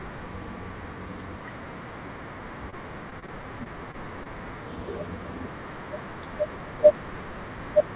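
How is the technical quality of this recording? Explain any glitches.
The speech comes through a narrowband call path with nothing above 4 kHz, which gives it a telephone-like dullness. Two packet-loss faults break the audio.

From 2.70 to 2.74 s there is a short concealed packet loss. About 20 ms of audio never arrived in time. The receiver bridged the hole by extending the preceding sound and then blending back into the real signal. It is heard as a single brief smear or wobble. Because it happens once and stands alone, it is distinct from the chopping that follows.

From 3.10 to 4.27 s there is repeated packet loss, producing a robotic sound. Six separate gaps, the longest about 25 ms, were each patched by continuing the last sound, and they add up to roughly 9% of that stretch. Because one patch follows another so closely, the speech turns choppy over more than a second, rather than giving a single isolated blip.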